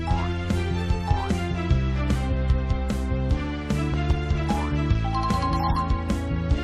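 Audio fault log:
3.94 to 4.13 s and 5.31 to 5.33 s, loud pop: two pops in quick succession, then a single one, each jumping about 5 dB above the sound, which carries on underneath. That points to a sudden voltage step, likely from a plug, switch, static or driver glitch.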